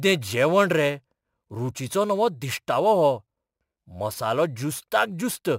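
From start to finish the speech carries a crude rate conversion fault: a gritty, inharmonic fizz that rides on louder syllables and sibilants and tracks their level. The sample rate has been raised by a small ratio, consistent with 44.1 kHz to 48 kHz, by repeating the nearest existing sample instead of filtering. That repetition follows a fixed cycle set by the two rates, producing shifted, inharmonic copies of the voice, sitting roughly 25 dB below it.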